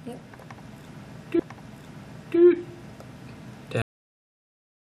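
At 1.38 s you get a stream segment repeated: the player fetched or queued the same chunk of the stream twice, so roughly a second of sound, running to 2.38 s, plays a second time. You hear the material loop back on itself, and there's a small blip right at the seam where it jumps back, which adds about a second to the overall running time.

Then at 3.82 s there's a cut-off end. The final buffers never got written or played out, so the sound stops dead partway through rather than decaying naturally. It drops straight to digital silence, with no tail or fade, and that silence carries through to the end of the file, which makes the stop feel abrupt and unnatural.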